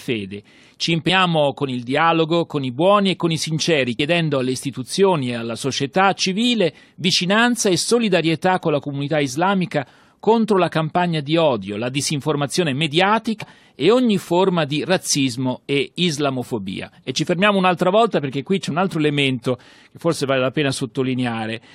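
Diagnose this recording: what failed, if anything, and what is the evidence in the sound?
The failure is in the codec stage: damaged data in a compressed stream. Brief glitches sound at 1.08 s, just before "con il dialogo con"; at 3.98 s, between "e con i sinceri" and "alle istituzioni e alla"; and from 13.41 to 13.43 s, before "e ogni forma di". Corrupted bytes made the decoder misread frames and resynchronise.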